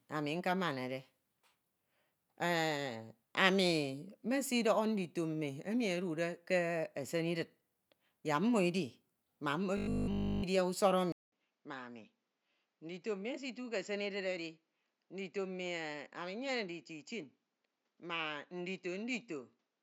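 A speech recording with two faults. From 9.77 to 10.43 s the sound turns into a rigid, metallic buzz at 50 Hz: robotic sound from repeated short buffers, likely caused by audio arriving too seldom so that the last 20 ms were looped over and over, with essentially all of that stretch made of repeats. On a spectrogram this appears as evenly spaced horizontal harmonic lines at multiples of 50 Hz replacing the natural speech contours, and the waveform shows an identical 20 ms shape repeating. From 11.12 s to the end the input switched to a poorer device, likely a change of microphone or a headset's call profile. A 200 ms silence marks the switch, followed by duller, boxier sound with a narrower band, a level about 10 dB lower, and a new noise floor well below the speech. The spectrogram shows a gap, then a lower upper frequency limit. The waveform has a flat stretch at the switch and visibly smaller peaks after it.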